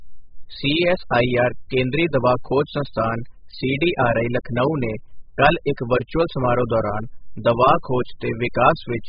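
AAC compression runs throughout this speech: nothing above 5 kHz, with dull, smeared, warbling sibilants, likely heavy AAC-LC coding at a bitrate as low as 8 kbps.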